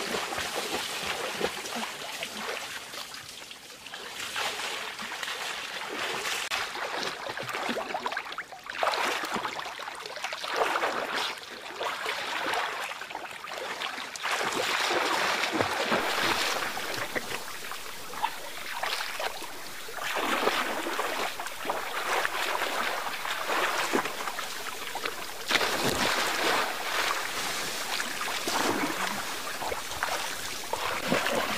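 From 16.00 s to the end, the audio turns grainy, with distortion that follows the signal and makes quiet parts gritty. This is low bit depth without dither, likely truncation to about 6 bits, leaving error only around 15 dB below the signal.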